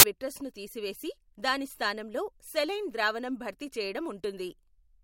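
It's a short speech clip, and it kicks off with file tags played as audio: from 0.00 to 0.03 s there's a hard-edged blast of very loud white noise before the talking starts with "విట్రస్ను తీసివేసి దాని స్థానంలో". That burst is compressed data, an embedded cover picture, being read as if it were samples. Because compressed bytes look random, they come out as very loud static with abrupt start and stop edges.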